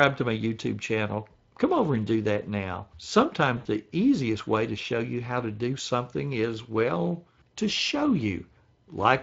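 From start to finish the speech carries Speex codec damage that is plainly audible. Speex is a CELP coder: it models each short frame with a vocal-tract filter driven by a coded excitation, and the excitation gets only a limited share of bits. Here that shortfall gives voiced sounds a grainy, hoarse, noisy texture rather than a clean tone. The degree of roughness fits a bitrate of around 20 kbps.

At 3.57 s, lasting to 3.67 s, comes VoIP packet loss concealed by the speech codec. About 80 ms of data is missing, which fits four 20 ms frames. With no new data, the decoder keeps repeating its last pitch and filter settings and lowers the gain a little with each frame. The result is a smeared stretch, buzzy or noise-like, that fades toward quiet. Because each frame builds on the previous one, the speech stays weak or distorted for tens of milliseconds or more after data returns.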